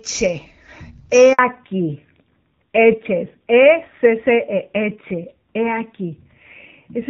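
At 1.33 s the speech cuts to silence for 60 ms, returning at 1.39 s. This is a handover gap: the call switched between networks, no speech frames arrived during the changeover, and whatever was said in that moment is gone.

From 1.39 s to the end, the speech sounds duller and rougher, with nothing above 4 kHz. This is a fallback to narrowband: the call dropped from the HD Voice codec, AMR-WB at 12.65 kbit/s with only light artefacts, to a narrowband codec, a sound that fits AMR-NB at around 7.4 kbit/s.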